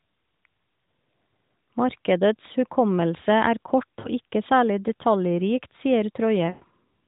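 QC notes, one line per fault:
4.00–4.08 s, lost AMR speech frames: a short dip lasting about 40 ms. Two 20 ms frames failed their checksum, and the decoder filled the gap by reusing the last good pitch and vocal tract settings at reduced gain.
6.46–6.64 s, lost AMR speech frames: the sound stretches into a drawn-out, fading tone and sinks toward silence before returning weak and rough. Losses are scattered across about 160 ms, with one unbroken run of 120 ms. Over that run, the narrowband decoder's repeated parameters and falling gain nearly reach silence. The surrounding audio stays capped at 4 kHz by the AMR-NB path.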